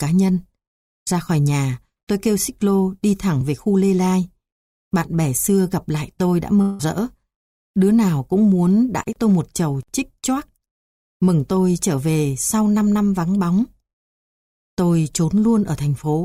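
At 6.61 s the sound breaks off and is replaced by a fading buzz for about 0.18 s. No silence follows. At 6.81 s the audio resumes, with about 0.18 s of material missing. This is likely a long network dropout, with the receiver smearing the last sound across the gap.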